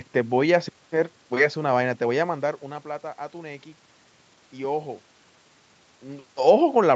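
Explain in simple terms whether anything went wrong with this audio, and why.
Nothing went wrong here; the call's microphone processing trims away the deepest bass and leaves nothing above 8 kHz, which is normal for a call, there's ordinary room noise in the background, and the speech gets quieter or louder at around two seconds and again near six seconds just because the talker moved relative to the microphone.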